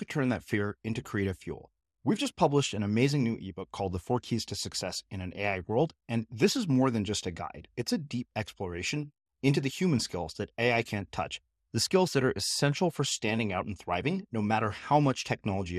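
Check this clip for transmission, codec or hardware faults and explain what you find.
The speech carries a codec fault from start to finish, most likely MP2 compression. Layer II coding splits the signal into 32 sub-bands and rations bits among them; starved, it switches upper bands off and coarsely quantises the rest. The damage, consistent with roughly 80 kbps, is plainly audible: dull, flickering highs and a gurgling, granular edge.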